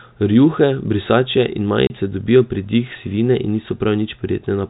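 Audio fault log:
1.87 to 1.90 s, packet loss filled with silence. The speech drops out for 30 ms. A stretch of the stream never arrived, and the receiver played silence in its place. The gap length fits three lost 10 ms packets. The cut is abrupt at both ends. Around the hole, the G.711 telephone band stays intact, with nothing heard above 4 kHz.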